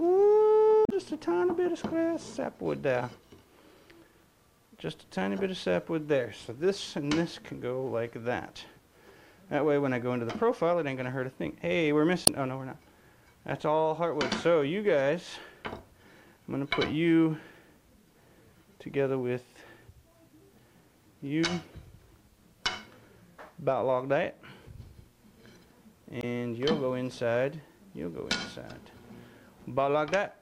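Damaged data in the compressed stream throws the decoder off at 0.85 to 0.92 s, 12.24 to 12.29 s and 26.20 to 26.24 s. It misreads or rejects the corrupted frames and hunts for the next valid header, leaving brief disruptions of about 36 to 63 ms in the sound.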